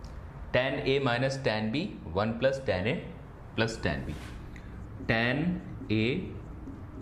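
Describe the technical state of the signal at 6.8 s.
At 6.8 s the signal is intact, with no audible fault at that moment.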